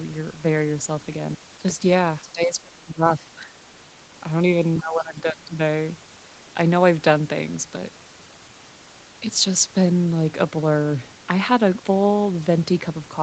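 A speech recording whose level collapses twice: from 2.2 to 3.56 s the voice drops by roughly 25 dB in pieces, about a second in total, and from 4.78 to 5.59 s it sinks again by roughly 20 dB. This pattern is likely speech suppressed in double talk, with an echo canceller mistaking overlapping talk for loudspeaker echo and attenuating the near-end voice along with it. Throughout, the audio carries nothing above 8 kHz.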